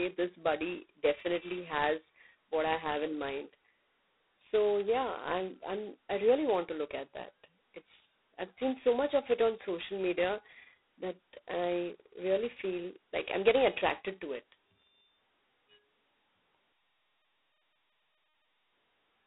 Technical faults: G.726 ADPCM

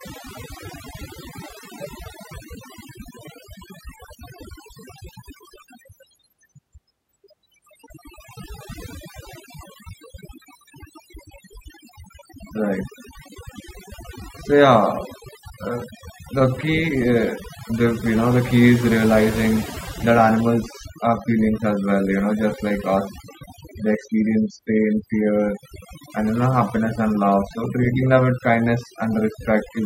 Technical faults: overdone noise removal

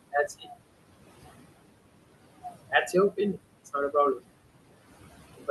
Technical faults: noise suppressor artifacts; speech cut by the noise suppressor

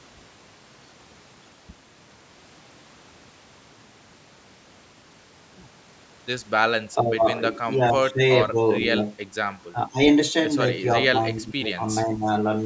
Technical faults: speech suppressed in double talk

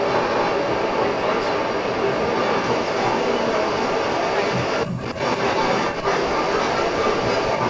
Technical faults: echo leak; speech suppressed in double talk

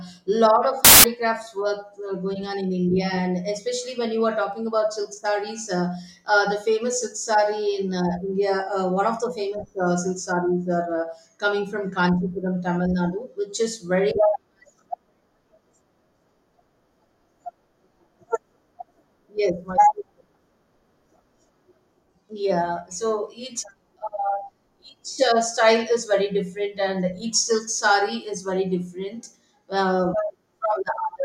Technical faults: samples built from the wrong bytes

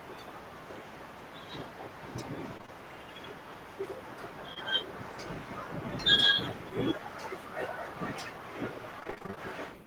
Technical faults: short concealed packet loss; repeated packet loss (robotic sound)

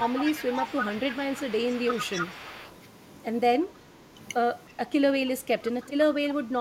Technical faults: speech suppressed in double talk; echo leak

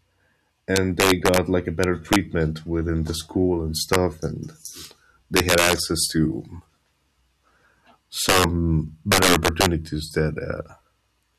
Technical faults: integer overflow

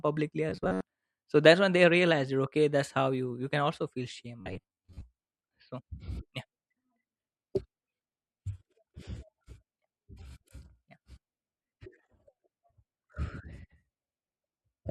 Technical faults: robotic sound from repeated short buffers

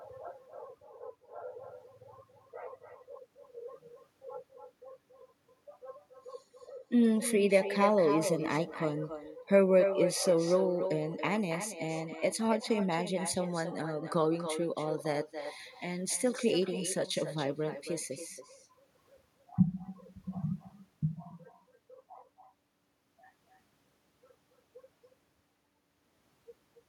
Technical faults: echo with no canceller

